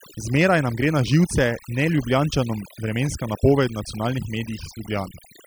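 Overdone noise removal runs through the whole clip. A noise reducer set far too strong pulls individual frequency bands down or out whenever they sit near its noise estimate, so the background collapses to near silence with twinkling specks while quieter parts of the voice vanish.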